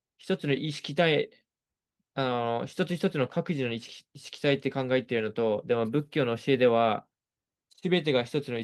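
A speech recording with nothing technically wrong in it. No fault can be heard at any point, so there are no times or causes to give.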